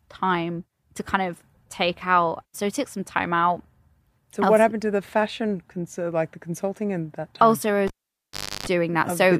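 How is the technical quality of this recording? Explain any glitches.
The recording has one clear glitch, a cable pulled and plugged in, between 7.87 and 8.66 s. A live lead was yanked and reinserted: a pop marks the break, the speech falls to near silence for about 0.74 s, and 50 Hz mains buzz rises for roughly 0.31 s as only the plug tip makes contact, ending in a second pop when the signal returns. Those bracketing pops and the hum are what set it apart from a simple digital dropout, which would go silent cleanly.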